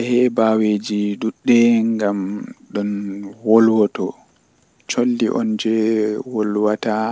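No technical faults can be heard anywhere in this speech clip. Nothing reaches above 8 kHz, the top of the band passed by the call's microphone processing and codec, which fits a G.722 wideband call link at 64 kbps.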